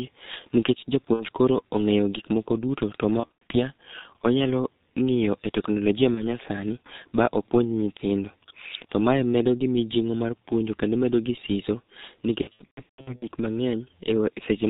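Throughout the clip the speech carries heavy G.723.1 codec damage at about 6.3 kbit/s. Nothing survives above 4 kHz, and the slowly updated voice model leaves a hoarse, muffled tone with smeared consonants. Unlike a simple low-pass filter, this roughness stays fixed and never clears.

Then comes VoIP packet loss concealed by the speech codec. At 1.13 to 1.24 s, just before "koro ong'eyo gikmoko duto", about 60 ms goes missing, which fits two lost 30 ms frames. After "gikmoko duto to ma", from 3.20 to 3.55 s, roughly 180 ms of gaps are scattered over 300 ms, with the longest run at 90 ms. After "onyalo ng'iyo e teknolojia", at 6.14 to 6.23 s, a single 30 ms frame drops out. The worst stretch runs from 12.41 to 13.26 s, where about 510 ms is lost across 810 ms, with runs of up to 150 ms. In each case the decoder stretches its last pitch and filter into a buzzy tone or coloured noise that fades, and the speech stays weak for a moment after packets return. 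That fading decay separates these dropouts from plain clicks.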